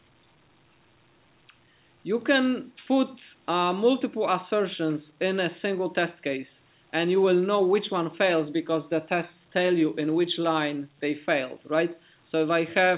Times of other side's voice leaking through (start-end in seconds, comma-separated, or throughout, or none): none